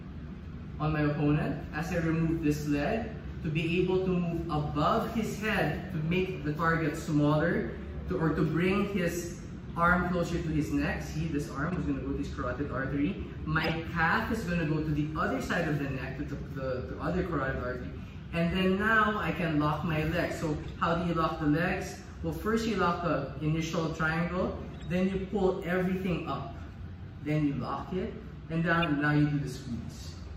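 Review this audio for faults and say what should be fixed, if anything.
Damaged compressed frames were passed to the decoder and played anyway (corrupt frame decoded). Misread gains and codes put energy at the wrong frequencies for one to a few frames each, heard as short blips or bursts at 11.70–11.74, 13.61–13.71 (loudest, peaking around −15 dBFS), 20.63–20.66, 24.74–24.82 (faint, around −40 dBFS) and 28.81–28.84 s. Checking frame integrity and concealing or muting frames that fail would prevent this.

From 27.92 to 29.65 s one channel runs roughly one sample (about 0.02 ms) late before the mono sum. This causes channel delay (comb filtering), with the first notch up near 20 kHz, so only the very top of the sound dulls slightly rather than turning hollow. Keeping both channels sample-aligned before summing would prevent it.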